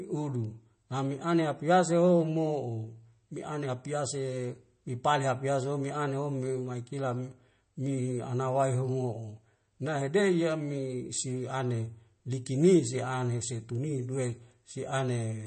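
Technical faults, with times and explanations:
throughout: likely MP3 compression at a rate near 32 kbps. The spectrogram is blank above 8.3 kHz, and weak components flicker on and off, sounding watery.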